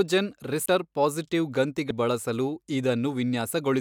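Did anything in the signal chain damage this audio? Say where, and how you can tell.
Yes. At 0.66 s and again at 1.90 s the speech jumps forward, dropping roughly 200 ms and then roughly 300 ms of material. These are compressed frames skipped at the codec decode stage. Whole frames were lost from the stream or rejected as corrupt, so playback resumed further on. The skip lengths fit several 32 ms frames.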